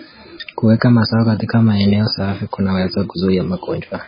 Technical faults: MP3 compression

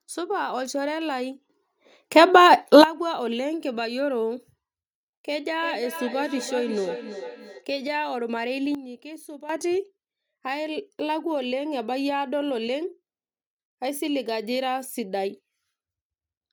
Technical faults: sudden gain jump; feedback echo between two devices

